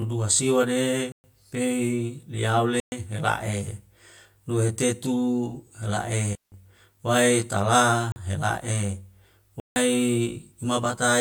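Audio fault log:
throughout: channel delay (comb filtering). One channel runs about 20 ms behind the other. When the two combine, the shared content cancels at evenly spaced frequencies, starting near 30 Hz. The result sounds rough or slightly doubled.
1.12–1.24 s, 2.80–2.92 s, 8.12–8.16 s, 9.60–9.76 s: block of digital silence. The speech drops to silence for 120, 120, 40 and 160 ms. Each hole starts and stops abruptly with no fade.
6.33–6.52 s: digital wireless dropout. The receiver mutes for about 190 ms after losing too much data. A very short fade softens the edges, so the gap is a clean hole of near silence. No noise burst comes before or after it.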